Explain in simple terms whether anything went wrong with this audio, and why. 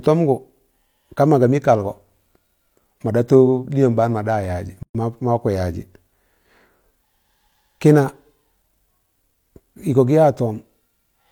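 Something did go wrong: there's a gap at a join of encoded pieces at about 4.83 to 4.95 s. The speech just stops for roughly 120 milliseconds, with softened edges, then picks up exactly where it left off. It sounds like the audio was encoded in separate chunks and stitched back together without trimming. Each chunk keeps the bit of silence the encoder adds at its start and the padding at its end, so a short hole opens at the seam.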